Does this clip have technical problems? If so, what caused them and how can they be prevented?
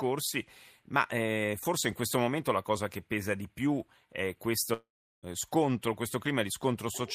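Yes. After "pesa di più è", a long network dropout runs from 4.73 to 5.25 s. The last sound fades as a brief buzz, then about 0.38 s of silence follows. Audio resumes at "eh scontro", with roughly half a second lost. The likely cause is packets that never arrived. A steadier connection and a larger jitter buffer would help prevent it.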